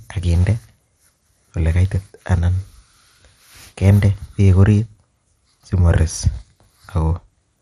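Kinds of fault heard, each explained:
MP2 compression: dull, gurgling, granular speech with nothing above 13.6 kHz; that coarse grain, absent from a clean low-pass, likely comes from Layer II coding near 64 kbps.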